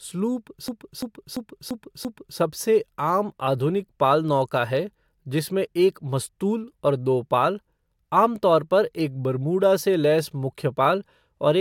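From 0.68 s to 2.39 s the speech gets caught in a system hang loop. The machine or driver stalled while the audio hardware kept replaying the same ring buffer, so one 341 ms chunk repeats five times at about 2.9 Hz. That's long enough to sound like a skipping record rather than a buzz, which fits a 16384-sample buffer. Next to nothing goes missing, and playback picks up at "सबसे आम आधुनिक पाल".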